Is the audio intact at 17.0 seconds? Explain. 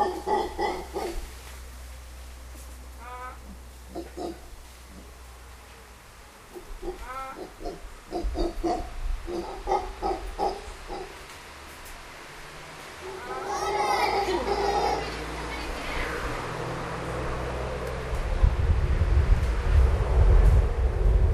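No, there's a single sharp click at 17.02 s, most likely dropped samples: well under a millisecond goes missing, so the waveform jumps straight to a later value.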